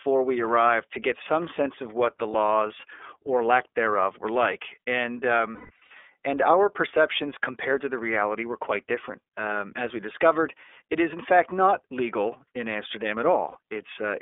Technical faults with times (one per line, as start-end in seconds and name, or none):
0.00-14.22 iLBC codec
2.30-2.35 lost iLBC frames
5.54-5.91 lost iLBC frames
13.50-13.57 lost iLBC frames